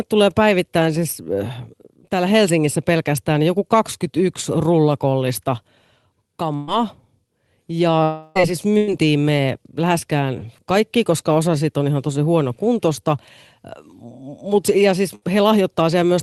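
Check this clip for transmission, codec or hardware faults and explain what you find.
Four transmission faults can be heard in this speech: three short bursts of packet loss and one longer dropout, all on a call path whose top end stops near 12 kHz, which fits Opus at around 24 kbps.

Burst of packet loss at 6.55 to 6.69 s, 8.77 to 8.89 s and 15.15 to 15.24 s. A few packets in a row never reached the player, so the receiver extended the last sound for about 120 ms, 100 ms and 60 ms, letting it decay. Each gap becomes a brief held buzz or fading hiss, and the speech resumes with that stretch missing. The second burst falls between "ei siis" and "me läheskään kaikki koska", and the third follows "mut ja siis".

Long network dropout at 8.03 to 8.37 s, just before "ei siis". For about 320 ms the last sound is stretched into a buzz or hiss that keeps fading, and then the speech returns with that whole section gone. 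The likely cause is a stall in which no packets arrived for roughly a third of a second, longer than the receiver can hide.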